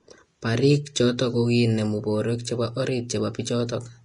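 Throughout, the speech is hissy and grainy with nothing above 10.6 kHz, likely heavy Vorbis compression; a spectrogram shows a flat ceiling and speckled treble.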